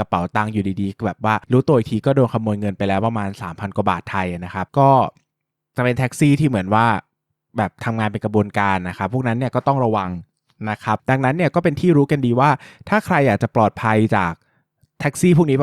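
Listening to the speech recording, nothing technical stood out as wrong at any point.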